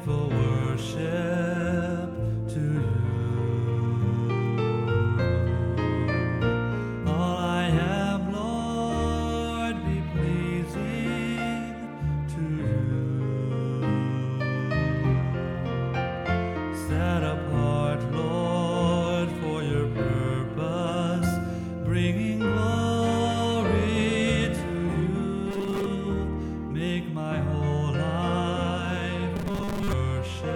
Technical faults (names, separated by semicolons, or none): robotic sound from repeated short buffers